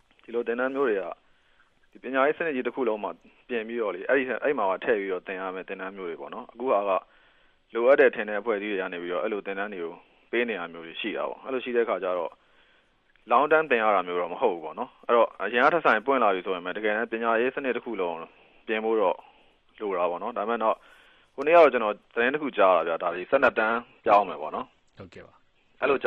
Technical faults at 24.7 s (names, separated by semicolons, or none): adaptive stream at a lower bitrate